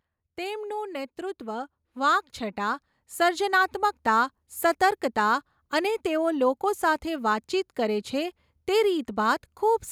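Speech in which voice and background swell together by about 8 dB from 0.36 to 4.01 s, an automatic gain rising as the control slowly lifts a too-quiet input.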